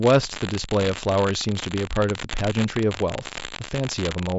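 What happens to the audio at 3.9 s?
At 3.9 s there is a steady crackling fizz laid over the speech, the same grainy texture that runs through the whole clip and fills the pauses as well. It comes from an unreliable data bit: one marginal data line flips its bit in a random share of samples, and each wrong bit adds a spike of identical size. The G.722 wideband coding at 48 kbit/s, with nothing above 7.6 kHz, is a separate layer beneath the crackle.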